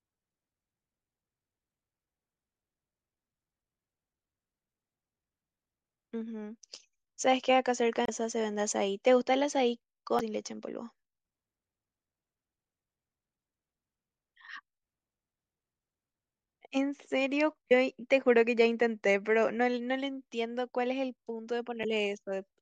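Damaged data in a compressed stream strikes four times: 8.05 to 8.09 s, then 10.19, 17.70 and 21.83 s. Corrupted bytes make the decoder misread frames and hunt for the next valid header, so each spot sounds like a brief chirp or squawk cutting into the speech.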